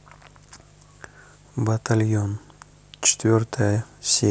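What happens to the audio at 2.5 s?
At 2.5 s there's mains buzz, running the whole clip: 50 Hz switching spikes spray harmonics up into the kilohertz, giving a steady, raspy hum roughly 30 dB under the speech.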